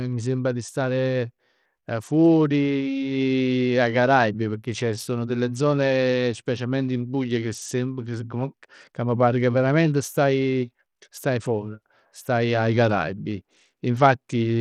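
From start to finish, the speech carries plainly audible codec damage, most likely Bluetooth SBC compression. The treble flickers and drops out. A gritty, grainy noise rides on the speech. Starved upper sub-bands and coarse quantisation fit a low bitrate around 80 kbps.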